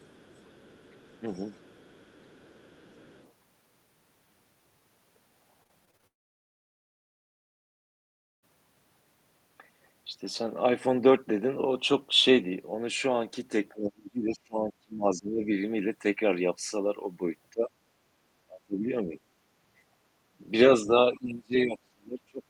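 From 0.0 to 3.32 s, a second voice sits faintly under the talker. This is the other side's voice leaking through, very quiet, roughly 30 dB below the main speech. The likely cause is a loudspeaker at the talker's end whose playback the echo canceller did not fully remove from the microphone.

Between 5.63 and 6.05 s the sound turns choppy. This is repeated packet loss, giving a robotic sound. Six short holes fall in under half a second, the longest about 22 ms. Each is patched by stretching the previous sound, and about 28 percent of the stretch is patched audio. The result is choppy, with small pieces missing.

Right after, from 6.07 to 8.44 s, the audio stops. This is a long network dropout, with nearly 2.4 s never arriving, likely from the connection stalling. A brief buzz carries on from the last sound and fades. Then there is silence for most of the gap. Speech resumes afterwards with that section simply gone.

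From 13.73 to 15.46 s the talker's speech sinks, dropping by as much as roughly 30 dB over about a second and a half. This is speech suppressed in double talk. Both ends likely spoke at once, and the echo canceller could not separate them, so it turned the microphone down. The voice dips. Shorter dips follow at 17.54 to 17.70 s and 18.48 to 19.18 s, each around 20 dB deep.

At 20.27 to 20.38 s the room sound drops by about 13 dB for a tenth of a second. This is background gated by the echo canceller, clamping the microphone while the loudspeaker played. It comes across as a brief hole in the ambience that closes again once the canceller releases.

Double-talk suppression returns twice more. From 20.83 to 20.91 s it causes a slight dip of a few decibels. From 21.14 s to the end it brings a deep cut of roughly 30 dB.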